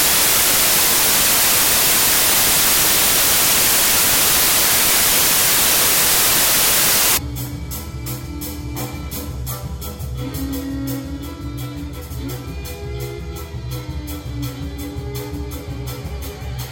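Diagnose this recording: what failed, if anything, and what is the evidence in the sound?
Samples built from the wrong bytes, from the start to 7.17 s, point to a failure at the sample-format conversion stage. For that stretch the audio is replaced by loud, harsh broadband noise. The reader is assembling each sample from misaligned or swapped bytes, so the rapidly changing low-order bits land in the most significant position and dominate every value, burying the real waveform under noise.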